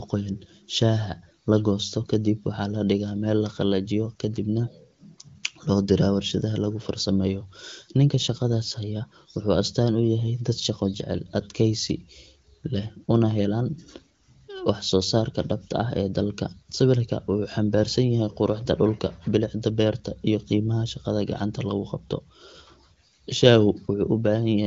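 No technical faults heard.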